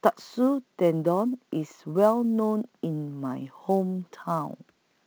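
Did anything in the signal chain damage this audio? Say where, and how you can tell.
Yes. Sample clock jitter at the converter: a timing wobble of roughly 10 µs adds hiss about 30 dB down, tracking loud, bright speech. On a spectrogram, high-frequency haze fades in pauses.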